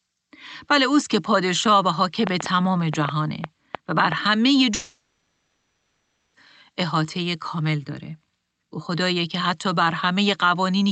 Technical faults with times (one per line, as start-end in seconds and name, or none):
2.27-4.13 train of clicks
4.74-6.35 long network dropout